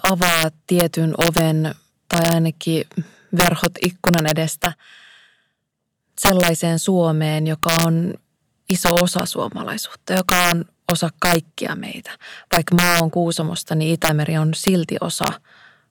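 Violent, sharp cracks break out on the loudest peaks of the speech throughout the clip, far harsher than ordinary clipping would sound. This is integer overflow: the signal was driven about 4 dB past full scale, and instead of being limited at the ceiling, each sample that exceeded the largest integer wrapped around to the opposite extreme. Only a small fraction of samples, well under one percent, cross that line, but each one produces a full-range jump that is heard as a crack.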